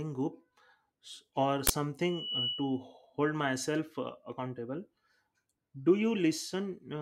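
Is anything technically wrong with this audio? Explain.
Yes, this speech clip has two faults.

From 1.67 to 1.70 s there is an uninitialised buffer: a block was sent to the output before any audio had been written into it, so whatever stale memory it held was played as samples. Its length of about 23 ms fits a 1024-sample block. It sounds like a brief, harsh blast of digital noise. On the waveform it is a short rectangle of jagged values, and on the spectrogram a bright broadband vertical stripe.

From 2.01 to 2.84 s, ending just before "myself uh accountable", a loudspeaker feedback squeal appears. The microphone is hearing the speaker it drives, and at 3 kHz the loop gain exceeds one, so that tone feeds on itself. It swells over a little under half a second to about the level of the speech, a piercing whistle. The spectrogram shows a thin horizontal line at 3 kHz that brightens and then holds, and the waveform's envelope rises steadily as the sine grows.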